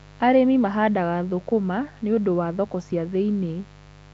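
From start to finish there's a mains buzz sitting under the speech, a steady raspy 50 Hz drone maybe 25 dB down. It comes from sharp switching spikes twice per mains cycle getting into the signal, so harmonics stack up well into the kilohertz range.

Running alongside it, the whole clip has a rough, hissy halo and a smeared, underwater feel, with nothing at all above 7.7 kHz. That's likely Nellymoser compression, the old Flash microphone codec, at something like 32 kbps, where weak bands get no bits and are filled with noise.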